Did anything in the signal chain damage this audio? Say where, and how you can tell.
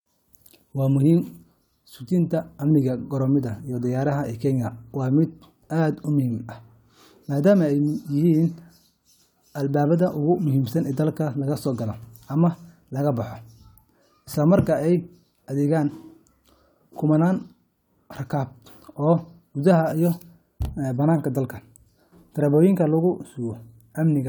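No, nothing in the chain.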